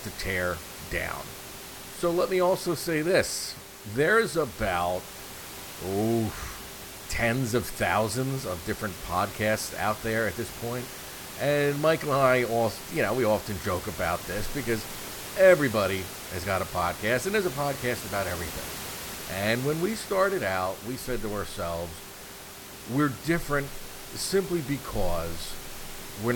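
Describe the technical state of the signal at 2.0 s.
At 2.0 s the audio is intact, with the speech sitting clearly above the room's own background noise, which runs about 13 dB below it.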